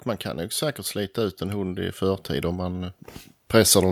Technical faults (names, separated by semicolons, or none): automatic gain rising